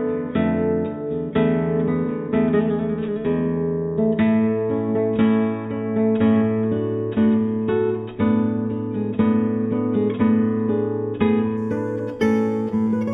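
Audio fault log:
11.57 to 13.14 s, imaging from linear upsampling: straight-line interpolation from 8 kHz to 48 kHz dulls the top of the band below 4 kHz and leaves a mirrored copy at 4 to 8 kHz, about 35 dB down, heard as a faint metallic shimmer. A plain band limit would leave that range silent instead.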